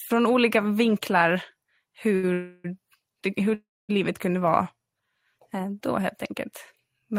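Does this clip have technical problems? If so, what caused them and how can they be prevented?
Yes. At 2.15–2.25 s a short stall from a late packet holds the speech for about 75 ms before resuming, with nothing lost. The jitter buffer ran empty briefly.

From 2.33 to 2.66 s and 3.54 to 3.91 s there are call audio freezes. The last sound is extended as a fading buzz, for 313 ms and then 346 ms, and the second freeze ends in about 240 ms of silence. Speech then resumes from where it stopped, likely because packets were held up in transit.

A larger or adaptive jitter buffer, together with a steadier network path, would prevent these stalls.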